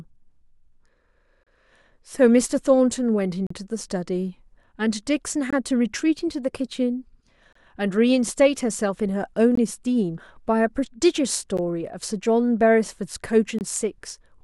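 The speech drops out briefly at 1.43, 3.47, 5.50, 7.53, 9.55, 11.57 and 13.59 s. Each is a gap between stream segments, which fits 2.0-second segments. Mismatched time stamps leave 12 to 38 ms of silence, with hard edges. Nothing is lost.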